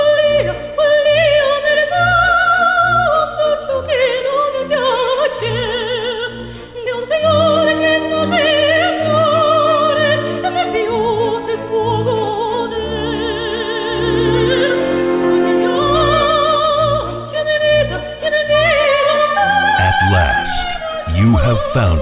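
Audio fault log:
No faults logged; the call path is working normally, with nothing above 4 kHz, which fits narrowband G.711 A-law coding at 64 kbps.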